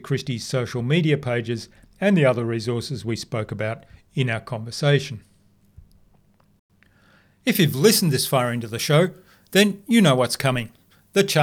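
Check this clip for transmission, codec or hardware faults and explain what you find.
One fault is present. From 7.55 s to the end, the speech turns suddenly thin, bright and hissy-sibilant. This is pre-emphasis left on: a treble boost, consistent with the 50 µs FM curve, was never undone, leaving 10 kHz about 10 dB hot relative to 1 kHz.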